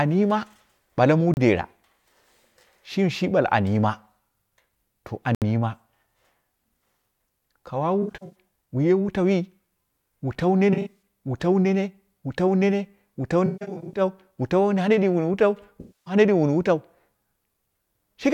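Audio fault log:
1.34 s and 5.35 s, block of digital silence: the output buffer likely went unfilled, so samples were zeroed for about 31 ms just after "yima bale muu" and 70 ms later. The sound drops to dead silence and returns abruptly around each short hole.
8.02–8.36 s, 10.73–11.02 s, 13.46–14.01 s, 15.81–16.14 s, AAC frame loss with concealment: the decoder lost 213, 213, 341 and 256 ms of frames, rebuilding them from the last good spectrum. These stretches sound smeared, noisy and phasey; in the third, just after "wu tau", the longest gap was roughly 150 ms.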